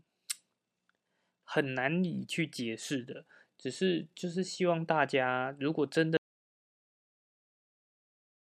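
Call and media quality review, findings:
Audio dropout to silence from 6.17 s to end of clip. Speech cut mid-flow, silent with no room tone. Likely input loss upstream of encoder, silence written.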